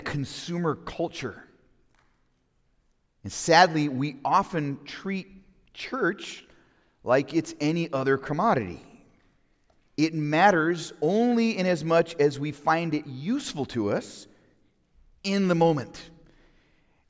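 No technical fault can be heard anywhere in the audio: the signal stays continuous and stable throughout, with nothing interrupting or disturbing it at any point.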